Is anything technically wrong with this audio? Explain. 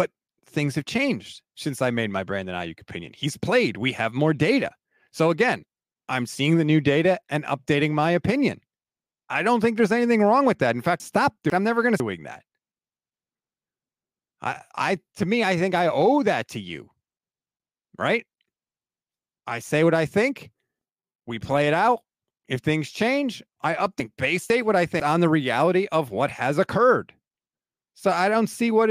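Yes, there are two spots with chunks out of order. At 11.0 to 12.0 s, and again at 24.0 to 25.0 s between "things change I" and "on the reality of", a half-second chunk plays one slot late, swapping places with its neighbour. That jumbles the speech briefly, with three hard joins at each spot.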